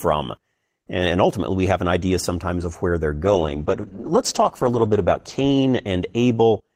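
From 3.29 s to 6.31 s the speech degrades with a call bitrate drop: the encoder was starved of bits, coding coarsely and trimming high frequencies for about 1.9 s at its worst. It sounds rough and muffled, consistent with a fall from roughly 32 kbps to 13 kbps.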